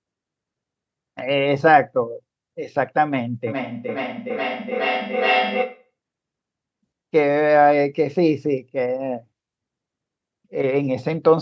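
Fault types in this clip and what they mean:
Feedback echo between two devices: a second device in the room replays the call audio into a microphone whose echo canceller cannot cancel it. From 3.47 to 5.91 s the speech returns at roughly 400 ms intervals, peaking about 3 dB below the direct speech.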